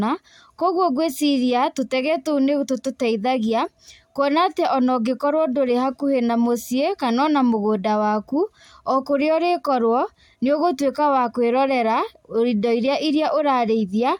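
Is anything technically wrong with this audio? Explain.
No, the speech signal carries no audible technical faults at any point.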